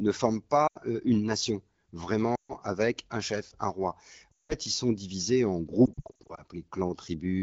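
Lost AMR speech frames break up the speech four times. From 0.68 to 0.78 s, just before "une nation", the decoder carries the last good pitch and vocal-tract settings forward with falling gain, dropping to near silence within two frames of the 80 ms gap. From 2.35 to 2.54 s, before "avec un chef un", and from 4.31 to 4.54 s, between "un chef un roi" and "ils sont divisés en", longer runs drop the sound to near silence. The recovered speech is briefly weak. From 5.85 to 6.42 s, short losses of up to 60 ms each are scattered across about half a second, giving repeated dips. The AMR wideband (HD Voice) coding around these gaps sounds clear.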